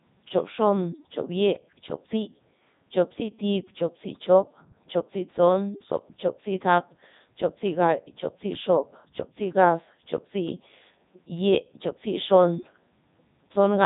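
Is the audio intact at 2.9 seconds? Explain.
No. At 2.9 seconds the speech carries Codec 2 vocoder damage, and that damage runs through the whole clip. The decoder rebuilds the voice from sine waves driven by pitch, voicing and a spectral envelope, so the original waveform is gone. The result is robotic and buzzy, with nothing above 3.8 kHz, which fits the 3.2 kbit/s mode. Unlike a plain low-pass filter or a low-bitrate transform codec, this synthetic, sine-built voice loses its natural texture.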